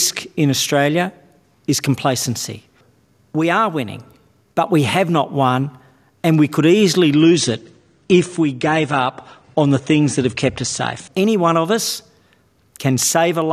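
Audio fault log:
7.12–11.12 s: adaptive stream at a lower bitrate. For four seconds the audio abruptly loses its top end, with nothing above 9.7 kHz, and coding artefacts become audible before full quality returns just as suddenly, without a gap. The quality profile points to the player dropping from roughly 96 kbit/s to about 32 kbit/s AAC while the connection slowed. At that rate the encoder discards high frequencies and quantises the remaining content more coarsely.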